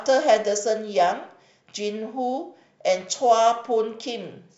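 No technical faults are audible anywhere in this recording.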